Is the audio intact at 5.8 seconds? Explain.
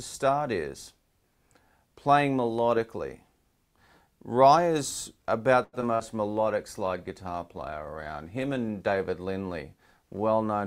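No. Just before that moment, a packet arrived late and the jitter buffer ran dry, causing a short stall from a late packet from 5.63 to 5.75 s. The receiver held the last sound for about 97 ms until the data arrived, then resumed from the same place, so nothing is lost but the sound is stretched, with a faint buzz or dip.

Right after, a short concealed packet loss occurs from 5.81 to 5.84 s. About 20 ms of audio never reached the decoder in time, and the receiver bridged the gap by extending the preceding sound before blending back, which comes across as a brief smear or wobble where a short sound may drop out.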